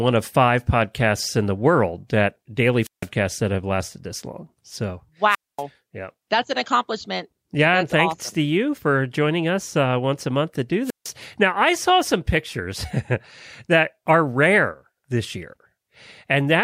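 At 2.80–3.08 s, 5.29–5.63 s and 10.83–11.12 s the speech suffers a wireless microphone squelch dropout. The analogue FM link fades until the receiver's squelch shuts the output, leaving holes of near silence lasting 0.16 s, 0.24 s and 0.15 s. Unlike a digital packet dropout, which cuts off abruptly, each hole here is preceded by a short swell of hiss or static as the signal weakens.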